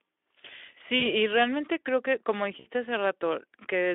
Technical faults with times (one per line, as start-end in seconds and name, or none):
0.99-1.07 VoIP packet loss concealed by the speech codec
2.59-2.67 VoIP packet loss concealed by the speech codec